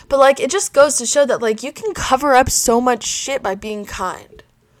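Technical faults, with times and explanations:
0.21 to 0.30 s and 0.79 to 0.82 s, hard clipping: the speech peaks exceed what a stage in the chain can pass by about 2 dB, so their tops are sheared flat. The squared-off waveform adds high harmonics, heard as brief crackle on those loud moments.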